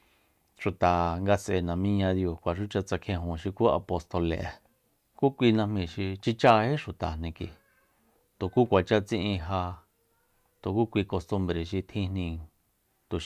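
No technical faults can be heard anywhere in the speech. There are no events to place in time order.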